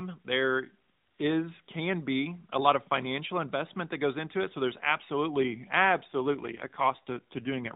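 An AMR rate drop begins at 6.08 s, just after "there's absolutely", and lasts to the end of the clip at 7.75 s. The speech runs through the AMR-NB mobile codec, audibly cut off above 4 kHz. At this point the codec moves to a lower bitrate without any gap or change in bandwidth. The sound suggests a step down from the 12.2 kbps mode to roughly 5.9 kbps. With fewer pulses to model each frame, the speech turns buzzier, rougher and more synthetic through the final seconds.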